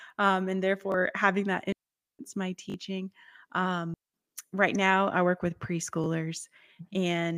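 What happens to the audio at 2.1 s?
A digital wireless dropout runs from 1.72 to 2.19 s, just after "having that". The receiver lost too much of the link's data and muted itself with a very short fade, leaving a clean 0.47 s hole of near silence with no noise burst on either side.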